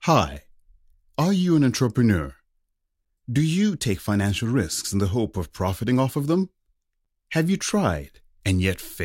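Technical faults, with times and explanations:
7.05 s, gap between stream segments: just after "profiting off of them" the speech drops to dead silence for about 10 ms, then resumes exactly where it left off. The time stamps of two neighbouring segments, each about 4 s long, don't quite meet, and the player pads the hole with zeros. Nothing is lost; the clip simply grows by that sliver. The waveform shows a flat line with abrupt edges, and the spectrogram shows a thin, fully blank vertical stripe.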